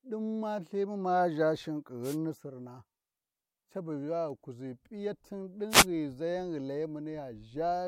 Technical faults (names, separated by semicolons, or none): wireless microphone noise hit